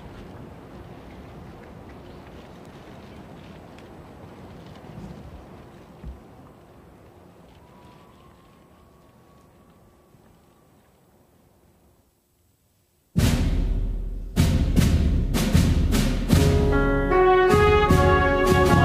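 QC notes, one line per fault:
Nothing to flag here: I listened all the way through and didn't catch a single problem worth a line.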